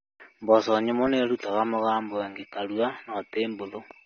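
From the first moment to the end, the speech sounds dull and smeared, and nothing comes through above about 6.3 kHz, so sibilants lose their edge and pick up a fizzy, watery texture. That's likely AAC compression, AAC-LC run at a low bitrate, something around 24 kbps from the way it sounds. With so few bits, the encoder pulls its cut-off down and quantises the frequency lines coarsely, which smears the detail and leaves that warble.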